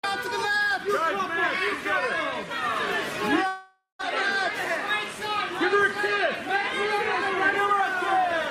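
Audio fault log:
3.47–4.03 s, long network dropout: the sound trails off into a fading buzz, then about 150 ms of near-silence, and resumes with roughly 0.4 s skipped. Likely a stall in arriving packets, with the receiver filling the gap by extending the last sound before giving up.
7.60–8.34 s, jitter buffer speed-up: the audio briefly runs about 5% fast while keeping its pitch, sounding slightly rushed. The receiver, holding excess buffered audio, trimmed short pitch-period pieces repeatedly, cutting around 40 ms in total to reduce delay.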